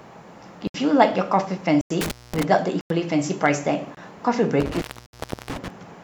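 At 0.67 to 0.74 s the program likely failed to fill its output buffer in time, leaving a block of digital silence about 70 ms long. The speech drops to silence and returns with no fade, leaving a short hole. A likely repeat of the same buffer underrun recurs at 1.81 to 1.90 s, this time about 93 ms, which fits a 4096-sample buffer.

From 2.01 to 2.44 s an intermittent contact appears: a loose cable or plug opens for about 224 ms in total. Crackle breaks up the speech at the edges, and faint hiss remains where the signal should be.

At 2.81 to 2.90 s another 93 ms block of digital silence cuts in with no fade. At 3.95 to 3.97 s a shorter 23 ms gap, consistent with a 1024-sample block, briefly cuts out the sound.

From 4.60 to 5.68 s the contact fails again, open for about 685 ms spread across that stretch, with crackling dropouts and hiss. Within it, at 5.06 to 5.13 s, a further 70 ms block of digital silence drops the output to silence, cutting out and back with no fade.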